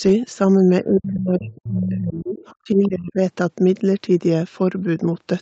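From 0.84 to 1.47 s the speech sinks, at worst by about 25 dB, which sounds like speech suppressed in double talk. Both ends were likely talking at once, and the echo canceller, unable to tell the near talker from loudspeaker echo, ducked everything. It happens again, harder, from 1.67 to 3.21 s, with drops of about 30 dB. Right after the first dip, from 1.47 to 1.68 s, the other side's voice leaks through, only about 15 dB under the speech. Fainter scraps, about 25 dB down, slip in at 2.37–2.46 s and 2.84–2.89 s. This sounds like echo the canceller likely failed to fully remove.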